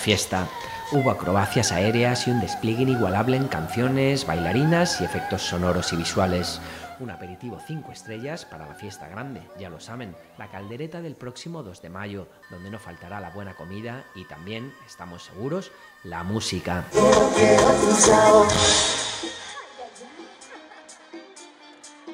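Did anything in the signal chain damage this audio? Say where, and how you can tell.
Yes. Zipper noise, 18.76 to 19.52 s, in buffer-stage gain. The level drops roughly 25 dB in unsmoothed 1 dB steps, about fifty per second, each one ticking.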